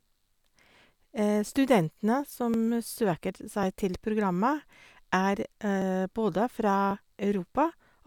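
From 0.35 s to 8.0 s the speech carries a click roughly every 1.09 s, about seven in all. These are likely clock drift buffer slips: two clocks differing by around a thousand parts per million, so short blocks of about fifty samples get dropped or repeated.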